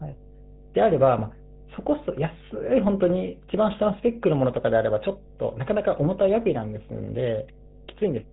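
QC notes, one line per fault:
throughout: mains hum. A steady low drone at 50 Hz sits under the speech for the whole clip, around 25 dB below it, so it stays quieter than the voice but never drops away in the pauses. The tone comes from the power line leaking into the signal path, through a ground loop between connected equipment or through a transformer close enough to induce it. That leak adds a fixed 50 Hz component with a few low harmonics.
throughout: GSM full-rate codec. The speech has a clearly audible buzzy, gravelly roughness, with a hard ceiling leaving nothing above 3.8 kHz, so sibilants and breath lose their edge. The coder describes the vocal tract with a filter and feeds it a sparse train of evenly spaced excitation pulses, keeping only a fraction of the original excitation. That coarse excitation produces the grainy buzz, and the rate suggests a 13 kbps full-rate coder.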